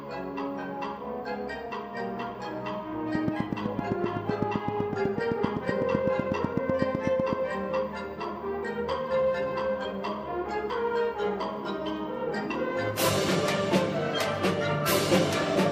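From 3.15 to 7.34 s a train of clicks runs at a regular 7.9 per second, about thirty in all, peaking around 15 dB above the signal. It ticks steadily over everything, likely from nearby interference, showing as evenly spaced vertical broadband lines and sharp near-identical spikes.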